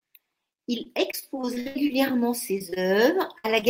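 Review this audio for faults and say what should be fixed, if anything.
From 0.83 to 2.13 s the speech breaks into repeated packet loss with a robotic sound. Eleven gaps, the longest 75 ms, are patched by extending the previous sound, so 23% of that stretch is concealment and about 0.24 s of real speech is gone. A spectrogram shows repeated smeared, over-regular harmonic blocks. The waveform shows chopped, periodic segments.

Short concealed packet loss occurs at 2.58 to 2.62 s, 2.70 to 2.74 s and 3.60 to 3.64 s. Each time about 20 ms of audio never arrived and was filled from the preceding sound before blending back. Each shows as a brief smeared column or small tick in the spectrogram and a slight waveform discontinuity.

A short stall from a late packet follows at 2.74 to 2.78 s. The jitter buffer ran dry when the packet's delay grew by 19 ms, so the last sound was stretched until it arrived. 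Nothing is lost, but a sound is held slightly too long, visible as a briefly frozen spectral slice.

A burst of packet loss at 3.38 to 3.46 s removes about 60 ms. The receiver continued the last sound while fading it down, giving a held buzz or decaying hiss. The spectrogram shows a flat, fading band, and the waveform shows a tapering envelope before the speech resumes further on.

To fix this, make the network path more stable and enable forward error correction with an adaptive jitter buffer that has enough headroom to absorb late and lost packets.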